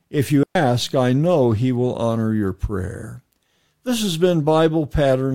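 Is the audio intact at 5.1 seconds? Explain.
Yes, the speech at 5.1 seconds plays through intact, with no fault at that moment.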